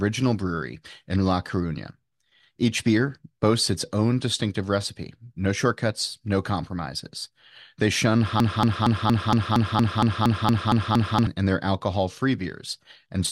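From 8.40 to 11.27 s, a broken-record loop, likely a stalled stream, repeats a 0.23 s fragment twelve times as identical waveform blocks before "in their alcohol".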